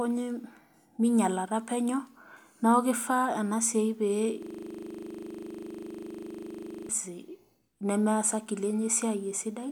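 From 4.43 to 6.89 s, a system hang loop repeats one 40 ms slice of speech. The stalled driver leaves the hardware cycling, producing a 25 Hz buzz.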